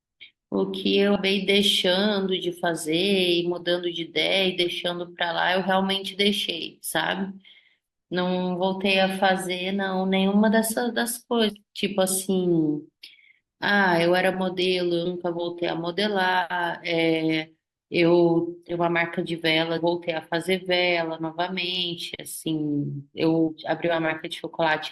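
Six times in this speech clip the audio jumps forward because compressed frames were skipped, meaning the decoder never played them, either because they were missing or it rejected them as damaged. You hear it at 1.15, 11.49, 15.05, 18.69, 19.77 and 23.47 s. Each time around a fifth of a second of speech just vanishes, except a shorter gap at 15.05 and a longer, roughly third-of-a-second one at 19.77. The jump sizes fit whole 20 ms frames.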